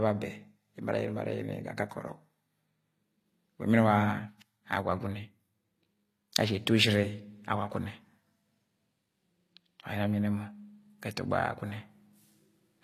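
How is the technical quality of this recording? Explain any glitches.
Technical quality is held back by plainly audible codec damage that runs through the whole speech recording. Throughout, likely HE-AAC compression at a low bitrate, fitting about 24 kbps, rebuilds the treble by copying lower bands upward. S sounds turn gritty and lispy, and nothing remains above 14.9 kHz.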